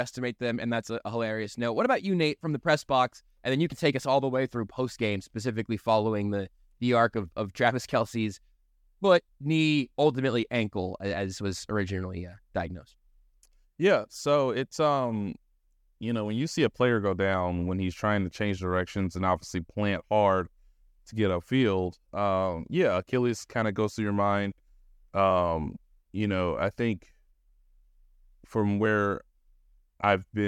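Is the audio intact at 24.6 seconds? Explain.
No. Just after "goes through your mind", 24.52 to 24.6 s has chunks out of order: a 20 ms chunk plays three chunks late, causing a jumbled blip.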